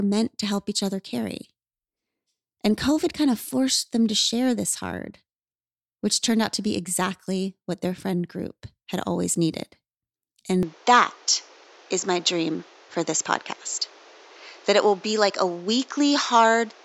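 At 10.63 s the speech abruptly loses its top end and stays dull and boxy until the end, with no gap at the change and little shift in loudness, most likely because the input switched to a poorer device. A new noise floor appears, roughly 30 dB under the speech. On a spectrogram, energy above 7.6 kHz vanishes along a sharp horizontal edge from that moment. The waveform envelope looks unchanged.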